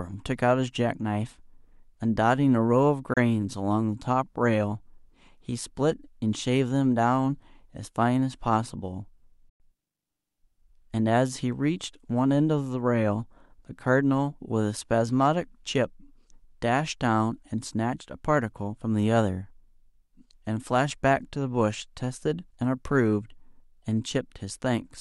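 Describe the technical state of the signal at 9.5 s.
From 9.49 to 9.60 s the speech cuts to silence, a Bluetooth dropout likely caused by lost wireless packets. Unlike a stall, it resumes further on rather than where it stopped.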